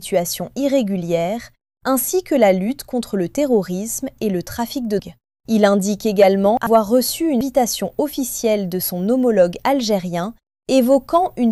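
Compressed frames skipped at 4.99 s, 6.30 to 6.85 s and 7.41 to 7.50 s: whole compressed frames are never decoded, so the sound jumps ahead by roughly 0.4 s, then about 0.2 s twice.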